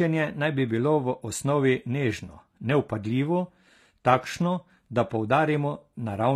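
All the way through, this speech has plainly audible HE-AAC compression, likely at a low rate around 24 kbps. The treble is rebuilt from lower bands, so s sounds come out gritty and lispy.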